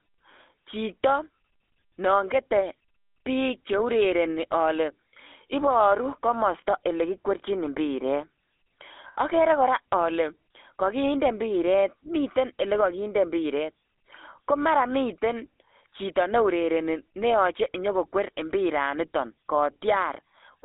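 Throughout, the speech carries the sound of the GSM full-rate codec, and the damage is plainly audible. The codec rebuilds the voice from a vocal-tract model excited by sparse, regularly spaced pulses, which gives a buzzy, gravelly roughness. The band sits at roughly 300 Hz to 3.6 kHz. The grain of the buzz sets it apart from simple narrowband filtering, and the character fits a 13 kbps GSM stream.

At 9.08 to 9.16 s come lost GSM frames, about 80 ms of them. The decoder filled the gap by repeating the last good frame, so the sound briefly freezes into a rough, metallic ring before the speech resumes. A dropout in uncompressed audio would give a click or plain silence. This gap is a held, metallic ring instead.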